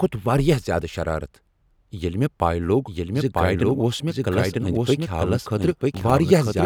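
From 2.86 s to the end, a doubled audio track appears, likely from a second, slower capture path feeding the same speech into the mix. A full copy trails about a second behind at roughly equal level, starting abruptly and running with no decay or room colour.

Between 5.64 and 6.10 s, processor overload crackle occurs: the processor misses a run of deadlines on very short buffers, and each miss replays a fragment of old audio with hard edges. A brief burst of gritty crackle rides over the speech.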